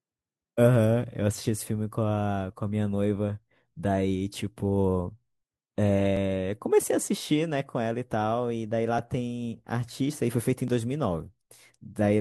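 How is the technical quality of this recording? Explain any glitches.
The speech recording has one glitch. At 10.68 s the sound jumps ahead by a few milliseconds with no gap. The likely cause is a dropped buffer (overrun): the software failed to read its samples before the hardware overwrote them, so the surrounding audio was spliced directly together.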